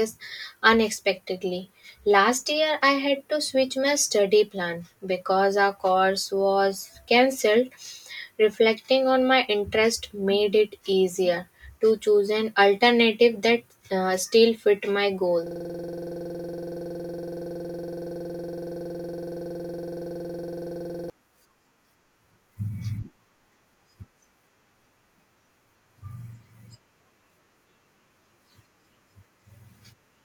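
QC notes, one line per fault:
15.47–21.10 s, system hang loop: right after "uh still fit my", a 46.44 ms slice repeats over a hundred times, giving a 21.5 Hz stuttering buzz. The playback path froze while the hardware kept replaying one ring buffer, which fits a 2048-sample buffer.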